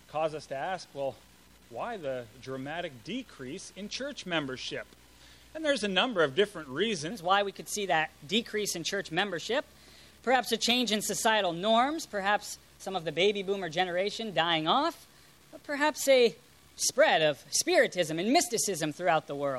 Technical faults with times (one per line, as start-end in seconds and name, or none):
7.11-19.59 section at the wrong speed